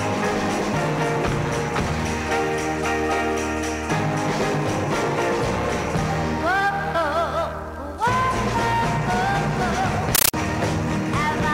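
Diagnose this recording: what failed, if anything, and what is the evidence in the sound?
From 10.15 to 10.34 s the sound is replaced by loud, harsh chattering static, pulsing at 31.25 bursts per second, each about 13.3 ms of noise then silence. This is a compressed stream played as audio: Dolby Digital (AC-3) passed over the digital playback link undecoded, its frames reproduced as raw samples.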